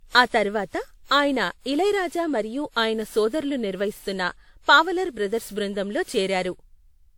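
Across the whole speech clip the sound is swirly, smeared and hollow, with consonant attacks blurred. This is most likely generation loss, with the audio re-encoded around seven times through a lossy codec whose character fits WMA at about 96 kbit/s. Each pass quantises on a shifted frame grid, so noise and holes accumulate. A spectrogram shows patchy, flickering gaps in the upper bands, smeared onsets, and nothing above 19.9 kHz.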